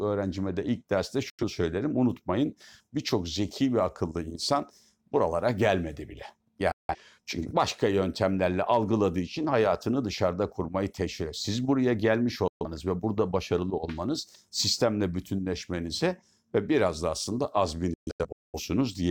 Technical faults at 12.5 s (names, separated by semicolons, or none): digital broadcast dropout